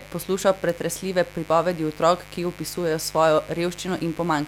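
A mains buzz runs under this speech recording from start to finish, caused by interference from a 50 Hz power supply getting into the signal chain, the kind of sharp switching spikes a dimmer, rectifier or unshielded cable lets in twice per mains cycle. Its harmonics stack up from 50 Hz into the kilohertz range, so instead of a soft hum there is a steady, raspy buzz sitting only about 20 dB below the speech.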